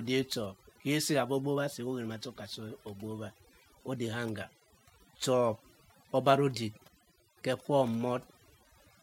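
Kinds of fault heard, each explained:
Overdone noise removal: noise reduction set too strong across the whole clip, cutting frequency bands near the noise estimate along with quiet speech detail. The background in pauses drops and breaks up into twinkling specks. Unlike codec swirl, the damage follows the noise floor.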